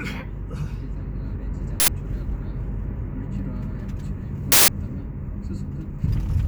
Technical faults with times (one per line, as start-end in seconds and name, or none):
1.80-1.88 uninitialised buffer
4.52-4.68 uninitialised buffer